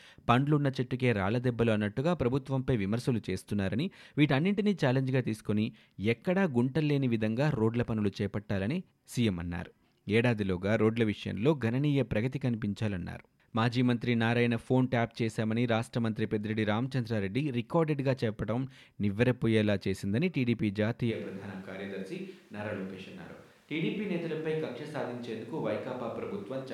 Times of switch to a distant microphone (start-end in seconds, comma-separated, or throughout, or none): 21.13-26.74